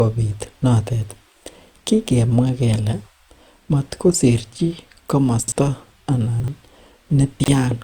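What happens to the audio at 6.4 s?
From 6.4 to 6.48 s the audio has chunks out of order. One 40 ms chunk plays one chunk late, after the chunk meant to follow it. Nothing is lost, but the order is scrambled. There are three hard joins, and the moment sounds briefly jumbled.

Generation loss also colours this stretch, as it does the whole clip. The sound is swirly, smeared and hollow, and attacks blur. That likely comes from lossy re-encoding done around four times, which fits repeated Opus passes near 64 kbit/s.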